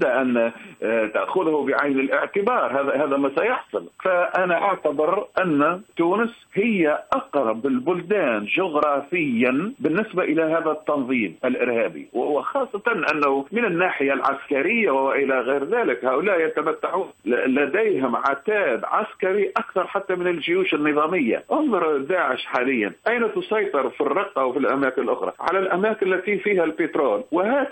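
The audio carries USB whine for its entire length: a steady, fixed-pitch tone at 8 kHz, strongest at that frequency, sitting roughly 45 dB below the programme level. An 8 kHz tone matches the 125-microsecond microframe rate of a high-speed USB bus. The periodic current drawn on each microframe modulates the shared power or ground, and that ripple couples into the analogue audio path of the interface or converter as an audible whine.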